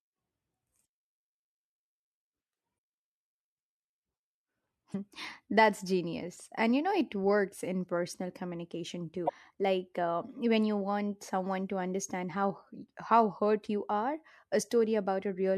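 At 2.75 to 2.77 s, 4.91 to 4.95 s and 9.25 to 9.30 s, just after "works in personal communication", short glitches cut into the speech. Each is damaged data in a compressed stream: corrupted bytes make the decoder misread frames and lose sync until it finds the next header.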